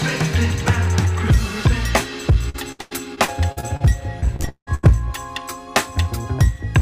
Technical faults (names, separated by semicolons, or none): repeated packet loss (robotic sound)